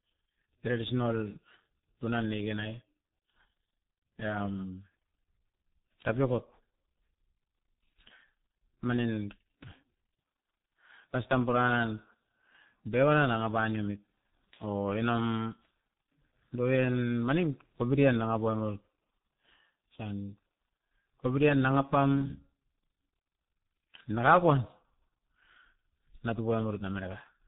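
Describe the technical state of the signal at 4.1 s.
At 4.1 s the speech carries the G.723.1 codec's heavy damage, present throughout: nothing above 3.8 kHz, with hoarse, smeared consonants from its coarse 30 ms frames that fit a roughly 6 kbit/s stream, unlike a plain low-pass filter.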